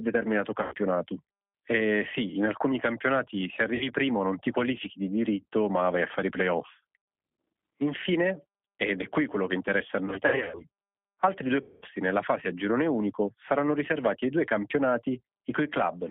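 Throughout, the speech carries G.729 codec damage: the band is confined to roughly 200 Hz to 3.4 kHz, and the texture is plainly rough and synthetic, as the sound is rebuilt from a filter, pitch predictor and sparse pulses, consistent with an 8 kbit/s G.729A stream.

VoIP packet loss concealed by the speech codec follows at 0.62 to 0.75 s (about 100 ms lost), 3.75 to 3.88 s (60 ms), and 7.02 to 7.08 s after "a fare i playoff" (60 ms). After "quello che interessa a", losses totalling 260 ms are scattered over 10.06 to 10.64 s, with runs up to 80 ms, before "altri due". From 11.62 to 11.86 s, between "altri due" and "nella fase a girone", 200 ms is lost. In each gap the decoder extends its last pitch and filter into a fading buzzy tone or coloured noise, and the sound stays weak briefly after packets resume.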